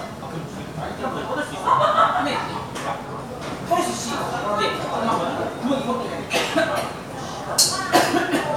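Throughout the clip runs computer activity noise, a faint buzzy chirping roughly 30 dB below the sound, pulsing at around 300 Hz as processor load shifts the shared ground. A spectrogram shows stacked harmonic lines that flicker independently of the sound.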